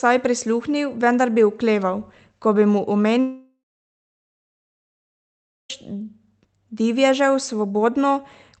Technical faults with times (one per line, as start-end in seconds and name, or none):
3.20-5.70 long network dropout